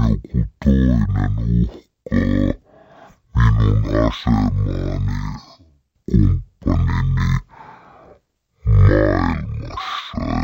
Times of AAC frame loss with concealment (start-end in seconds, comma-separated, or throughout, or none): none